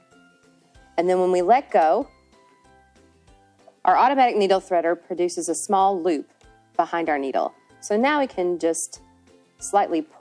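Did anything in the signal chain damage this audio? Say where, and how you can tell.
No, nothing in the signal chain has left any audible damage on this audio. No stage between capture and playback leaves a mark on the sound that would point to a problem.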